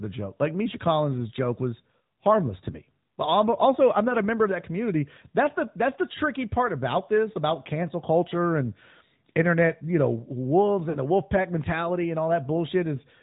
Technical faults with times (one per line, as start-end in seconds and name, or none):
0.00-13.22 AMR narrowband mobile codec
10.90-10.97 lost AMR speech frames